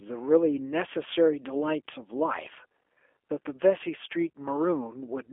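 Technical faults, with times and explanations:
Throughout: G.729 codec. The speech is held to a telephone band of about 300 Hz to 3.4 kHz, with nothing above 3.6 kHz, and it carries a plainly audible rough, slightly synthetic grain. That texture comes from the signal being rebuilt from a vocal tract filter, a pitch predictor and a handful of coded pulses per frame, which fits an 8 kbit/s G.729A stream. Plain band-limiting would sound muffled but smooth. Here the harshness sits in the voiced sound itself.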